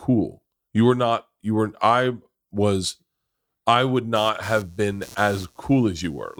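Speech carries computer activity noise from 4.16 s to the end at 6.39 s, just after "I would": a buzzy chirping pulsing around 150 times a second, roughly 25 dB below the voice, from computer load changes disturbing the shared audio ground, appearing on a spectrogram as evenly spaced vertical striations.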